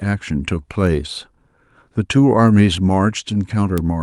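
At 0.87, 2.48 and 3.78 s the speech has a bit error spike: a flipped bit throws a sample or a few off by a power of two and straight back. Each one's a single sharp, broadband tick that has nothing to do with the talking around it.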